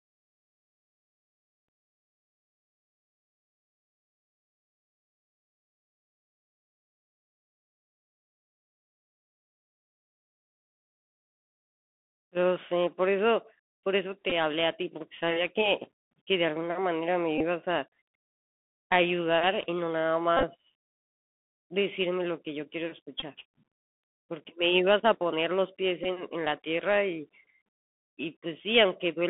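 The whole speech clip passes through the Bluetooth CVSD headset codec. Its band runs only from 200 Hz to about 3.6 kHz. S sounds turn scratchy, and a granular hiss sits underneath.

Bluetooth headset packets are repeated at 14.30, 17.38, 20.37, 23.20 and 26.04 s. Lost packets were replaced by replaying the previous one. Each gap gives a brief buzz near 267 Hz. The one at 20.37 s is scattered over 60 ms.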